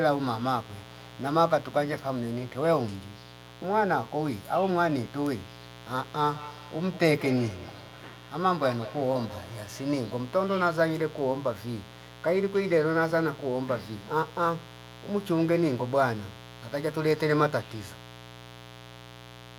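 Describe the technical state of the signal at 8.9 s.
At 8.9 s the speech carries a mains buzz, present for the whole clip. Sharp switching spikes, of the kind a dimmer, rectifier or missing shield lets in, enter twice per cycle of a 60 Hz supply, so the interference is a stack of 60 Hz harmonics climbing into the kilohertz range rather than a pure hum. It sits roughly 20 dB below the speech and is heard as a steady, raspy buzz under everything.

The moment also falls inside a feedback echo between two devices, running from 6.3 s to 10.12 s. Two devices on the same call share a room: one plays back what the other's microphone sent, and that microphone picks it up again. Each echo canceller only removes its own device's output, so the returned audio circulates. Speech comes round again at an interval of about a fifth of a second, each repeat thinner and more ringing, with the strongest return about 16 dB below the direct speech.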